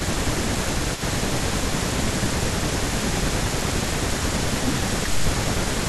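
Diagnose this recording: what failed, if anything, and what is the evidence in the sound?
Call processing failed. The speech dips in level twice: from 0.0 to 3.7 s, for about one and a half seconds in total, by up to about 10 dB; and from 4.29 to 5.87 s, for about half a second, by up to about 5 dB. This is speech suppressed in double talk. The likely cause is an echo canceller that could not separate this talker from the loudspeaker echo while both sides spoke, so it turned both down.

Call processing is also at fault here. A delayed copy of the speech runs throughout the clip, 276 ms behind the original and about 10 dB quieter. This is echo leak. The likely cause is a loudspeaker end whose echo canceller left part of its microphone pickup in place and sent it back.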